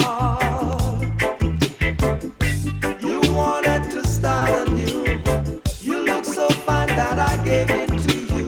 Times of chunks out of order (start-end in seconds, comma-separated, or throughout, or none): none